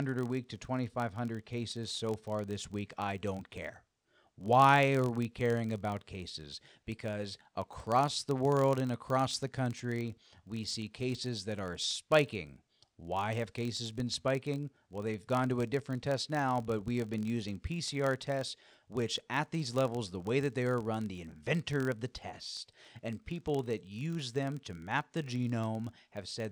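Throughout the speech, a buzz at about 43.1 Hz rides under the sound. This is a filter restarted on every block. It loses its state and begins each block from silence, leaving a small tick. The rate fits a 1024-sample block. The buzz grows and fades with the speech level.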